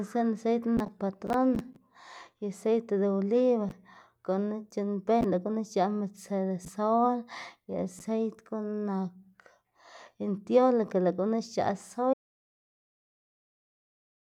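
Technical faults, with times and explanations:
12.14 s to the end, audio dropout to silence: the speech cuts off mid-flow at 12.14 s and what follows, about 2.2 s, is dead digital silence right to the end of the clip, with no room tone or noise floor underneath. That total absence of background is the giveaway. The likely cause is the input dropping out, from a lost connection, a failed link or a mute, while the recorder kept writing silence, so whatever was said there is simply gone.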